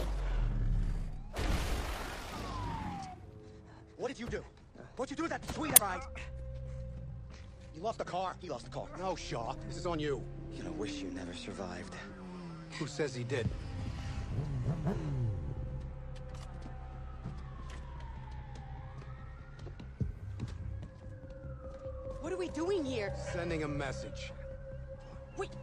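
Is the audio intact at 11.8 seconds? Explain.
Yes, the audio is intact at 11.8 seconds, with no dropout, click, distortion or other fault at that point.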